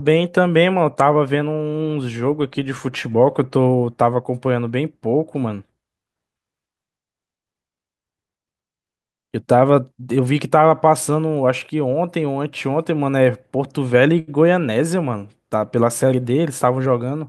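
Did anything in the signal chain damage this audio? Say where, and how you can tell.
Yes, at the network stage. A short stall from a late packet hits at 14.19 to 14.30 s. A packet missed its playout time, the jitter buffer ran dry, and the receiver stretched the last sound to cover about 82 ms. When the packet arrived, playback resumed from the same point, so no speech is missing. Instead, a sound is held unnaturally long with a faint buzzy or dipped quality, and the end-to-end delay grows by 82 ms.

The second fault is a jitter buffer speed-up at 16.23 to 17.01 s. The buffer had built up more audio than its target, the kind of backlog that follows delayed packets arriving together. To shrink the delay, the receiver cut many short pitch-period-sized slices in succession, removing around 70 ms in total. The speech plays at about 109% speed while keeping its pitch, so that stretch sounds rushed rather than higher.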